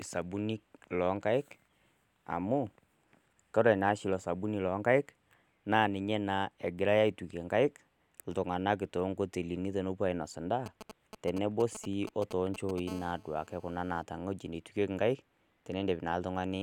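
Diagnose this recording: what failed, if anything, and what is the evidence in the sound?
GSM signalling bursts, analogue stage, 10.66 to 12.80 s: fairly loud galloping ticks and brief 217 Hz buzzes. Rectified radio bursts show as clustered vertical stripes on a spectrogram.

GSM phone buzz, analogue stage, 12.88 to 14.03 s: steady raspy 217 Hz buzz, about 22 dB below the speech. Call-mode transmission is rectified, giving evenly spaced harmonic lines on a spectrogram.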